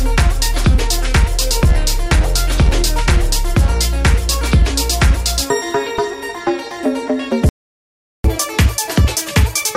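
A playback stall at 7.49 s cuts the sound off mid-flow, leaving about 0.75 s of silence until 8.24 s. The player likely ran short of buffered data or had its output thread blocked, so nothing reached the output until it recovered.

Catch-up at higher speed follows from 8.24 s to the end at 9.76 s. The player resamples its backlog to run 1.25 times faster, so everything sounds hurried and raised by about four semitones as it tries to recover the lost time.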